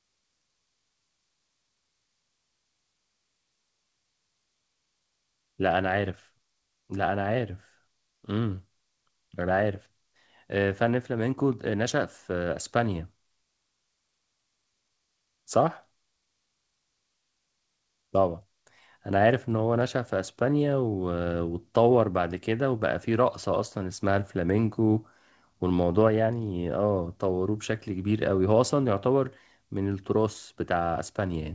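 Nothing faulty to report; the speech shows the expected band limit of a wideband call path, with no content above 8 kHz, consistent with G.722 over WebRTC.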